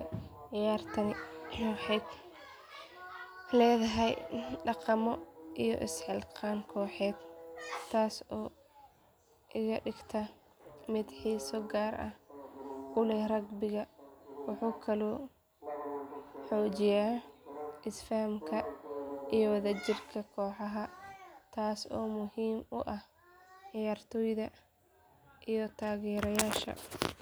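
A spoken recording with no audible technical fault at any point in the signal.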